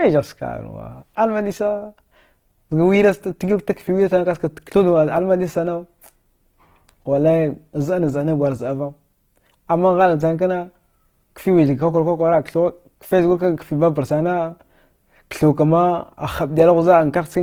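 From start to finish the speech carries Opus compression damage, plainly audible as a grainy, rough texture where bands have been filled with noise rather than left empty. Unlike MP3 artefacts, there is little swirling or watery warble, and the top is not cut away: content still reaches about 20.2 kHz. The likely cause is Opus running in its music mode with too few bits, which fits a rate near 16 kbps.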